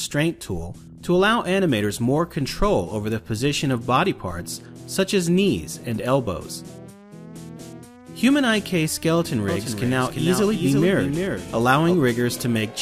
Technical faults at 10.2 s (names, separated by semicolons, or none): doubled audio track